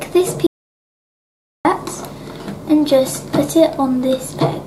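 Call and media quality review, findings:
Audio dropout to silence, 0.47 to 1.65 s. Input signal lost, likely a disconnected device or failed link, while the encoder kept writing silence. Sound cuts off abruptly, then 1.18 s of silence with no room tone before it resumes mid-flow. Gap content unrecoverable.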